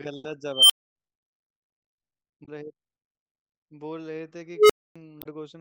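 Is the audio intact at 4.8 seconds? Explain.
No. At 4.8 seconds the speech is inside an unstable filter fault running from 4.54 to 4.96 s. A recursive filter's feedback has gone out of bounds, so a tone around 400 Hz swells over about 150 ms, clips, then overflows, and the output drops to silence for roughly 260 ms until the filter resets. 4.8 s falls in that gap. Unlike acoustic feedback howl, the squeal peaks within a fraction of a second and ends in abrupt silence rather than sustaining.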